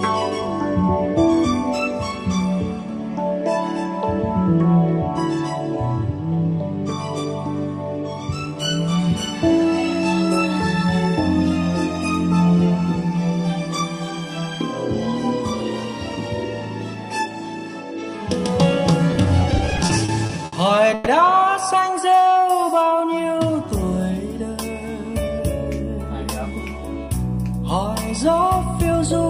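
Between 19.11 and 20.54 s the audio breaks into repeated stalls (stutter): fifteen short gaps of up to 70 ms, about 270 ms in all, are filled with continuations of the preceding sound as the jitter buffer keeps running dry, showing on a spectrogram as brief smeared, repeated slices. At 20.94–21.08 s a 120 ms continuation of the last sound holds before the audio resumes with nothing lost, visible as a short frozen, flat-textured band; the likely cause is a call audio freeze, with packets held up in transit. From 21.95 to 23.70 s a jitter buffer slow-down stretches the audio to 90% speed at unchanged pitch, adding 173 ms through repeated short segments that appear as drawn-out, evenly repeated waveform cycles.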